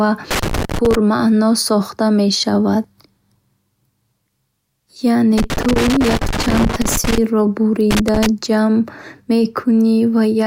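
Loose connector crackle at 0.31 to 0.95 s, 5.38 to 7.18 s and 7.91 to 8.26 s: an intermittent contact chops the speech into irregular scratchy bursts, unlike evenly spaced digital clicks.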